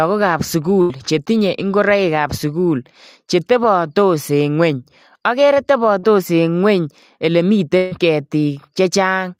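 At 0.81 s the speech has a burst of packet loss lasting to 0.91 s. About 80 ms of audio failed to arrive, and the receiver stretched the last sound into that gap as a held, fading tail rather than playing silence. The audio then resumes at "chetinye ingoroikab sukul chetebatos" with that stretch missing. A second burst of packet loss runs from 7.77 to 7.93 s. Here roughly 140 ms is replaced by a continued, decaying version of the preceding sound before the real signal picks up again.

Between these, just after "ngweny akere", there is a short concealed packet loss from 5.99 to 6.05 s. About 40 ms never reached the decoder in time. The gap was patched by extending the preceding sound and blending back into the true audio, which leaves a brief smear in the speech.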